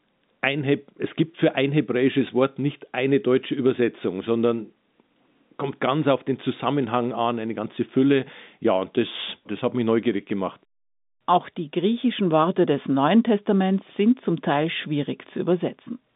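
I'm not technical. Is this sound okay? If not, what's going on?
Yes, no faults found; the narrow, boxy tone comes from ordinary telephone-line coding, which carries nothing above about 3.8 kHz, and that is normal for a phone call.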